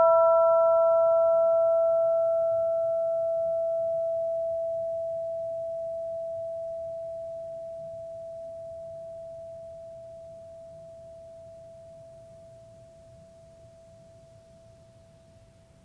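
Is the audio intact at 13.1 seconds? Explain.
Yes, the music plays through 13.1 seconds without any dropout, click or other fault.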